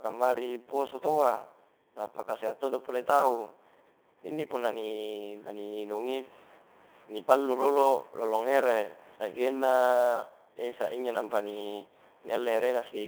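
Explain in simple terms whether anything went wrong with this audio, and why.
Codec 2 vocoder, across the whole clip: the speech was rebuilt from a rough outline of pitch and tone using simple tones, so it sounds heavily robotic, buzzy and thin.

Sample clock jitter, also throughout: the recorder's timing wobbled slightly, capturing samples a little early or late, adding a rough hiss on louder, brighter sounds that vanishes in pauses.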